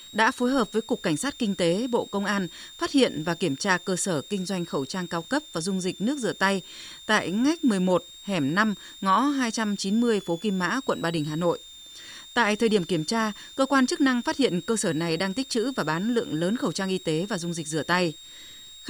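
A switching supply whistle runs through the whole speech clip, a thin high tone sitting around 4 kHz and wandering between about 3.4 kHz and 3.9 kHz. It comes from a switching power supply dropping into an audible burst mode or beating against another supply, so its frequency shifts as the load changes. The whistle sits roughly 20 dB below the speech.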